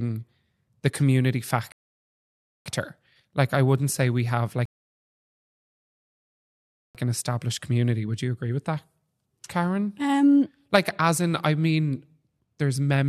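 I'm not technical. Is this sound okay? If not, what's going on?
No. The speech has two rebuffering stalls, at 1.72 s for 0.94 s and at 4.65 s for 2.29 s. Playback ran out of downloaded audio, went silent, then resumed exactly where it stopped.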